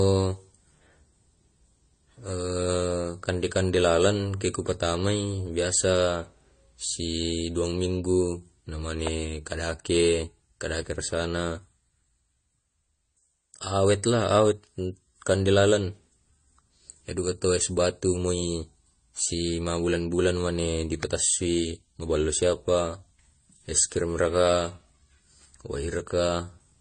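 Throughout the speech, nothing is heard above 9 kHz. Smeared, swirling artefacts of two different kinds sit on top of each other. This is likely transcoding between lossy codecs, which points to MP3 at around 48 kbit/s re-encoded as AAC-LC at around 32 kbit/s.

At 9.07 s and again at 21.03 s, a sharp electrical spike cuts in over the speech. Each lasts only a few milliseconds. These are likely electrical switching spikes, where a nearby switch or discharge arcs and the audio line picks it up.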